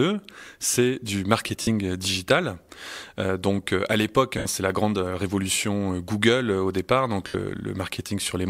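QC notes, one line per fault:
1.62 s, 4.38 s, 7.27 s: lost LE Audio frames, gaps of 52, 75 and 68 ms after "c'est du", "donc euh à l'époque" and "au départ donc". The LC3 decoder repeats the last spectrum with random signs and fades it, leaving a brief noisy smear.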